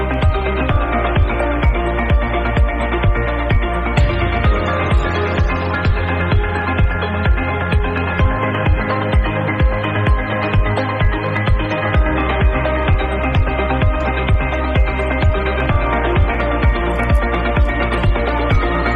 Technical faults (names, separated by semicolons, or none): low bit depth without dither